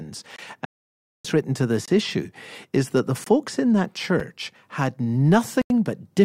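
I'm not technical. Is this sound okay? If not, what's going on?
No. The speech has two kinds of fault.

The first is a block of digital silence, which happens five times: 0.36 to 0.38 s, 1.86 to 1.88 s, 3.24 to 3.26 s, a very brief one at 4.20 s, and a longer one from 5.62 to 5.70 s. Each time the sound drops to total silence and comes back instantly. The very brief one comes across as a tick, and the last gap is long enough to hear as a short hole. The gaps sound like the playing program falling behind and leaving a buffer empty. Most are about 21 ms, which fits a 1024-sample buffer, and the last is about 85 ms.

The second is AAC frame loss with muting, from 0.65 to 1.25 s. For about 0.6 seconds the sound disappears, probably because a run of compressed audio packets never arrived and the decoder filled the space with nothing. What sets it apart from the blocks of silence is its smooth edges. 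The sound fades out and back in over a brief moment, so there is no sharp cut, just a soft dropout that is much longer.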